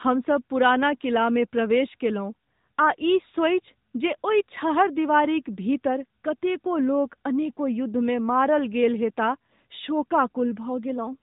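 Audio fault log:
throughout, AMR narrowband mobile codec: the speech has that unmistakable phone-call sound. Everything stops dead around 3.8 kHz, because the signal was squeezed to 8 kHz sampling, so sibilants and air are just gone. The codec rebuilds the voice from a vocal-tract model fed by a handful of pulses per 5 ms, and you can plainly hear the resulting buzzy, synthetic edge. That degree of damage fits one of the mid-rate AMR-NB modes, around 10 kbps.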